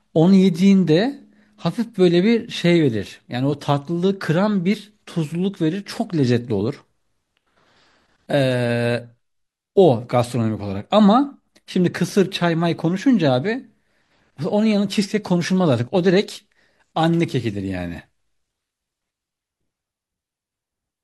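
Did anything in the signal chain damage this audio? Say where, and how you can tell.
No, nothing in the signal chain can be heard damaging this speech recording. No stage of the chain leaves a mark on the audio.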